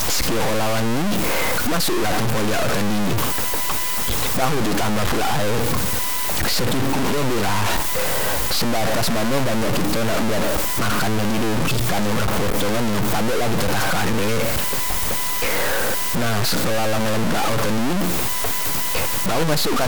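Speech runs through the whole clip under a coarse, grainy distortion that rises and falls with the speaking. Quiet passages turn especially gritty, and the softest moments either cut to silence or sputter between two levels. The likely cause is low bit depth without dither. The audio appears truncated to very few steps, which fits a 3-bit signal. With no dither, the rounding error tracks the waveform and sits only about 10 dB beneath the speech.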